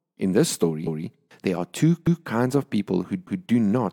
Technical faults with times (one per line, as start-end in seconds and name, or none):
2.07-2.27 overlapping chunks
3.27-3.47 overlapping chunks